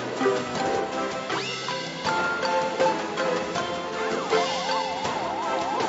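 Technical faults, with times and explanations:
No technical faults can be heard anywhere in the clip. Nothing stands out to a careful listener that would call for a time or an explanation.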